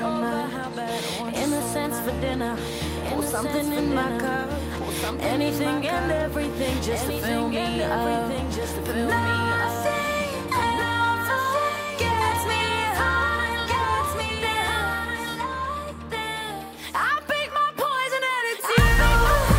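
Throughout the clip, every sound is followed by a second full-band copy arriving roughly one and a half seconds later and about 5 dB quieter, dry and without any decay. This doubled audio track is likely a second, slower capture path mixed in.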